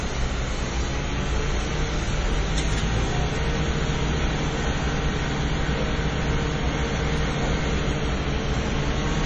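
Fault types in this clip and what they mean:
MP3 compression: Throughout the clip the sound has a watery, swirling texture, with faint components flickering in and out and attacks smeared rather than crisp, and nothing at all is left above 9.2 kHz. This is likely heavy MP3 encoding at a bitrate that fits about 32 kbps. Starved of bits, the encoder cut the treble at a fixed point and discarded weak frequency lines that came and went between frames.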